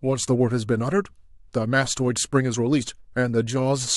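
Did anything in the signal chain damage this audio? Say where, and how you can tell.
No, nothing in the signal chain audibly damaged this speech recording, and no stage from capture through playback leaves a trace that can be heard.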